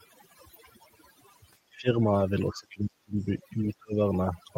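Across the whole clip there is overdone noise removal. The noise reduction was set so aggressively that frequency bands sitting near its noise estimate are pulled far down or switched off, taking the quieter parts of the speech with them. The background collapses into near silence dotted with twinkling specks. On a spectrogram the gaps between words look almost black, scattered with isolated bright dots, and the speech harmonics appear ragged and patchy.

From 1.74 to 1.96 s the speech dips by about 15 dB for well over half of that span, which sounds like the speech being suppressed in double talk. This is likely an echo canceller that could not tell its own talker from the far side's echo while both spoke, so it turned everything down. The dip returns from 2.51 to 3.28 s, deeper at about 25 dB and covering most of the stretch, then again from 3.78 to 3.99 s at about 35 dB, where the voice nearly drops out. 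The waveform shows these as sudden shrinking of the envelope. On the spectrogram the upper frequencies thin out or vanish in pieces.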